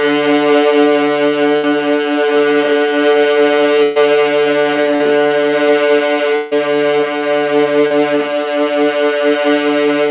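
At 1.56 s the sound stops moving and hangs as a held tone or hiss that fades for about 70 ms before the audio picks up again at 1.66 s, with roughly 80 ms of the original gone. The same thing happens, longer, from 3.83 to 3.99 s: about 120 ms of continued, dimming sound stands in for 120 ms that never returns. Both are bursts of packet loss. Several packets in a row failed to arrive in time, the receiver stretched the last received audio and lowered it across the hole, and playback then resumed past the lost section.

Two briefer blips come at 4.96 s and 7.87 s, each a quick smear or wobble lasting about 40 ms and 30 ms respectively, after which the audio blends straight back in. These are short concealed packet loss: about 40 ms of the stream was missing each time, and the decoder patched it by extending the preceding sound, following its pitch where it had one or using shaped noise where it did not, then crossfading into the real signal.

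From 6.36 to 6.54 s there is a longer stall. A held, fading continuation of the last sound runs for about 160 ms, with no drop to silence, and the audio returns further on with roughly 160 ms skipped. The likely cause is a long network dropout, with the receiver concealing the gap until packets resumed. Behind all of this the call path's band-limited sound is audible, with nothing above 4 kHz, which fits G.711 mu-law.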